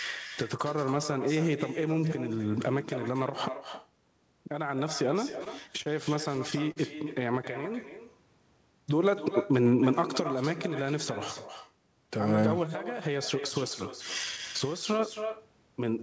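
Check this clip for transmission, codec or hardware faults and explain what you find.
Three faults are audible in this speech: an uncancelled echo throughout, a burst of stutter, and one short stall. The sound is band-limited at 8 kHz, as a G.722 call path would leave it.

Echo with no canceller runs through the whole clip. The far end's loudspeaker feeds its microphone and nothing subtracts it, so every phrase returns about 11 dB down, thinner, roughly a third of a second later. That distinct delayed copy sets it apart from ordinary room reverberation.

Repeated stalls (stutter) occur from 5.30 to 5.88 s. Late packets emptied the jitter buffer four times, and the receiver extended the last sound each time, 57 ms in total with the longest gap 30 ms. Nothing is lost, so the speech drags and jitters instead of cutting out as dropouts would.

A short stall from a late packet falls between 6.72 and 6.78 s. 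One packet arrived 42 ms late, and the receiver held the preceding sound for those 42 ms before resuming where it left off. It is a single prolonged sound with a slight buzz or dip, not a repeated stutter.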